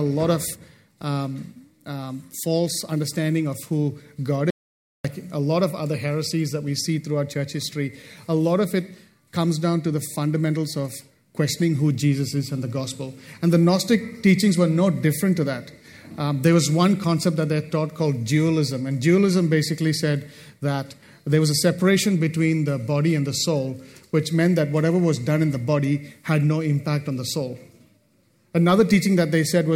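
The input to the recorder was likely lost for a moment, and writing continued with silence, an audio dropout to silence from 4.50 to 5.05 s. The sound stops abruptly for about 0.54 s, leaving total silence with no room tone, then resumes mid-flow.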